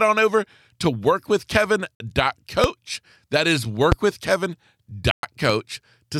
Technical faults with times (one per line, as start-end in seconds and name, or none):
1.95-2.00 Bluetooth stall
2.64-2.67 loud pop
3.92-3.95 loud pop
5.11-5.23 Bluetooth stall
5.50-5.52 loud pop